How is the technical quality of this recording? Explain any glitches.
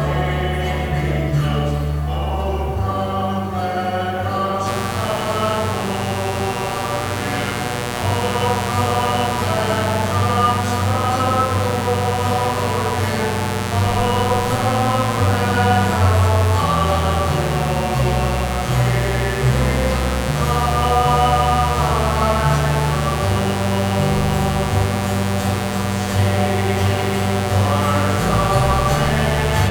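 The recording is marred by mains buzz from 4.64 s to the end. Something in the signal path, such as a dimmer, a rectifier or an unshielded lead, is letting sharp switching spikes from the 60 Hz supply leak in, twice per cycle. Those spikes carry harmonics of 60 Hz stretching up into the kHz range, so what you hear is a steady, raspy buzz sitting only modestly below the wanted sound and running unbroken to the close.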